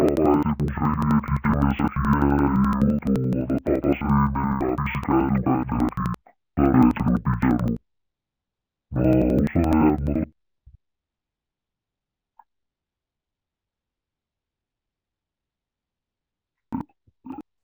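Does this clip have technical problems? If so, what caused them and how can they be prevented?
Yes. Throughout the speech the voice sounds an octave low, doubled and choppy, with a stutter repeating about 11.7 times a second. This is interleaved audio read as planar. Each block of about 85 ms, which fits a 4096-sample buffer, holds alternating left and right samples. The first half of the block is treated as one channel and the second half as the other. Both halves are stretched to fill the block, which halves the pitch while keeping the overall pace. To prevent this, make the reading code use the same sample layout, interleaved or planar, that the source delivers.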